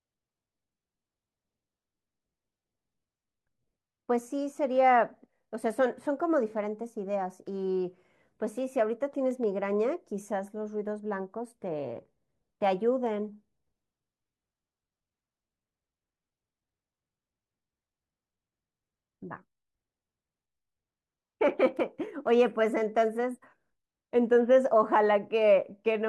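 No audible technical faults here.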